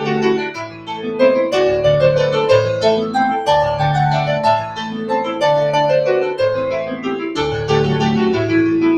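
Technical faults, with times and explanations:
throughout: noise suppressor applied to music or sounds. A speech-tuned suppressor treats steady sound as noise, so the level pumps by around 10 dB, and sustains and tails thin out.
0.41–1.14 s, 4.63–5.11 s, 5.27–5.42 s, 6.84–7.06 s: sound cut by the noise suppressor. These passages were mistaken for noise and pulled down by about 14, 8, 4 and 9 dB respectively, so they sink or fade early.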